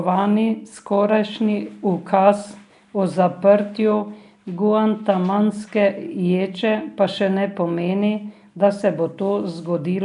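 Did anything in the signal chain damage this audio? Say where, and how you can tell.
Yes. Throughout the speech there is a rough, hissy halo and a smeared, underwater quality, with nothing above 10.6 kHz. The codec stage is the likely cause: Nellymoser compression, which fits roughly 44 kbps, starves weak bands of bits and fills them with noise.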